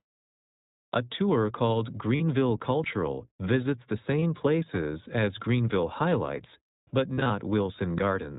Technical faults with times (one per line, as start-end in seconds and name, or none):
0.00-8.38 iLBC codec
2.16-2.21 lost iLBC frames
4.20-4.23 lost iLBC frames
7.14-7.31 lost iLBC frames